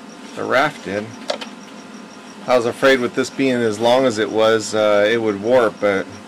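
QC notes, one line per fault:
0.52–0.66 s, 2.50–2.95 s, 3.42–5.15 s and 5.51–5.92 s, hard clipping: the signal overran a stage's limit by about 6 to 8 dB, so peaks were sliced flat. The squared-off tops add high harmonics, heard as distortion on the loud peaks.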